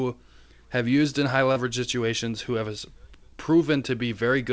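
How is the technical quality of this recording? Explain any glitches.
The recording has one audible glitch, a short concealed packet loss, heard over call-path audio whose content stops at 8 kHz. From 1.52 to 1.58 s, between "have used in high" and "situations who has", roughly 40 ms of audio never arrived. The receiver extended the preceding sound and then blended back, leaving a brief smear or wobble. Unlike a plain dropout, there is no silent gap or hard click.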